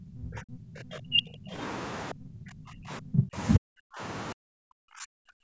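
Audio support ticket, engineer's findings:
Speech repeatedly dips and chops out, deepest roughly 40 dB down, at 0–1.58, 2.12–3.37, 3.57–4.01 and 4.33–5.44 s. Likely speech suppressed in double talk: echo canceller muting near-end talker during far-end overlap.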